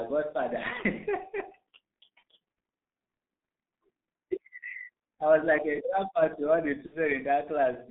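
From the first second the speech has that G.723.1 codec sound, muffled and hoarse, with consonants smeared. The line band runs only from about 150 Hz to 3.7 kHz, and at around 6.3 kbit/s the heavy coding updates its model of the voice too slowly to keep up, so detail just blurs away for the whole clip.

Then at 6.86 s there's VoIP packet loss concealed by the speech codec, running to about 6.98 s. Roughly 60 ms went missing, which fits two 30 ms frames. The decoder filled the gap by carrying its last pitch and filter forward and turning the gain down, so you hear the voice stretch into a buzzy tone or coloured noise that fades. The weakness lingers briefly after real audio comes back.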